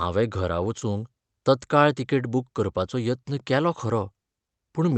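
At 0.79 to 0.82 s there's a short concealed packet loss: about 20 ms of the call arrived too late, so the receiver stretched the preceding sound to cover it and faded back in, leaving a quick smear. The call codec's top end stops around 8 kHz throughout.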